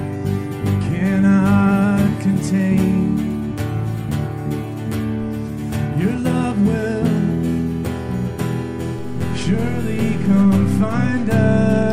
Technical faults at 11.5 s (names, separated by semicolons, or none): DC step